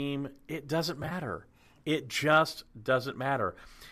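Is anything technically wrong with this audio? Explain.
Yes. From 1.03 to 1.12 s there is AAC frame loss with concealment: about 40 ms of frames went missing in short runs of around 20 ms spread over 80 ms. The decoder patched each gap from the last good spectrum, so you hear a brief smeared, phasey roughness rather than the clean silent gap of a true dropout. Elsewhere there is light coding damage from the low-delay AAC codec that is likely carrying the audio.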